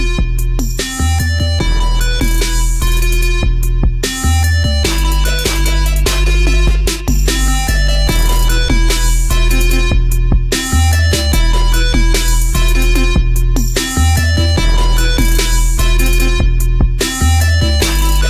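Nothing here calls for comment, since no technical fault turns up anywhere in the recording.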